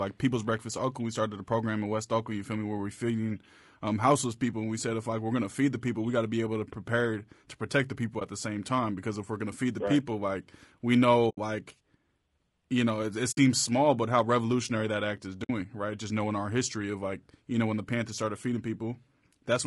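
Speech run through what is likely low-delay AAC compression (AAC-ELD) at a rate that sounds like about 32 kbps: its short frames capture the pitch harmonics poorly, so the voice is plainly rough and grainy throughout, with noise filling the gaps between harmonics and a thin, synthetic top band. AAC frame loss with muting also occurs. Lost frames were decoded as silence, leaving a brief dip at 8.19 s (20 ms) and soft-edged holes at 11.29 s (80 ms), 13.31 s (60 ms) and 15.43 s (60 ms), each fading out and back in.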